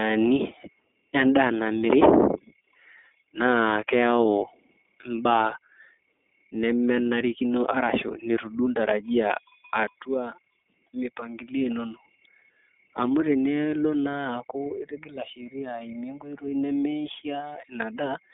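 From start to finish, the speech carries iLBC codec damage. Everything above about 3.6 kHz is gone, and the low end is thin below 250 Hz. Each 30 ms frame is coded on its own. This leaves the sound rough and slightly synthetic. The damage is plainly audible. The rate fits 13.33 kbps.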